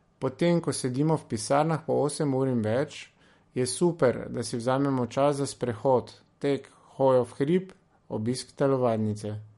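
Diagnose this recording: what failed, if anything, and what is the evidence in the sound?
The fault sits at the codec stage. The speech has plainly audible MP3 compression damage from start to finish. Nothing comes through above 11.2 kHz, a hard treble ceiling. S sounds turn swirly and metallic, and consonant onsets smear. The encoder was likely starved of bits, which fits a low rate of about 48 kbps. It cut the top band and dropped weak frequency lines. Those lines flicker on and off between frames.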